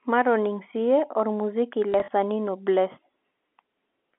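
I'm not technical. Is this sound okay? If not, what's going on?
No. From 1.92 to 2.08 s the speech stutters with a brief robotic buzz. This is packet loss with the last packet repeated: pieces of sound went missing, about 80 ms in all, and the receiver replayed the previous piece to fill each gap.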